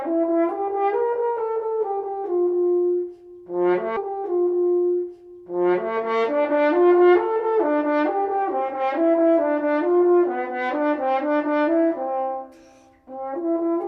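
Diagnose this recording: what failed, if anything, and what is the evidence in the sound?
A stream segment repeated at the playback stage, in the streaming player's segment handling. At 3.96 s the audio jumps back and a 2-second stretch plays again, running to 5.96 s, so the same material is heard twice in succession. A small blip marks the jump back, where the end of one segment meets the start of its duplicate. The player fetched or queued that segment twice, adding 2 seconds to the programme.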